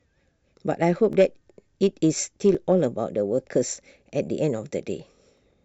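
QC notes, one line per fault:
1.13–5.38 s, clock drift buffer slips: a regular click every 1.41 s, about four in all, likely from two free-running clocks dropping or repeating sample blocks.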